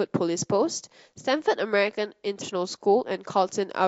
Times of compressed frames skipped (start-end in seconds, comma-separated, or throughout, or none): 2.40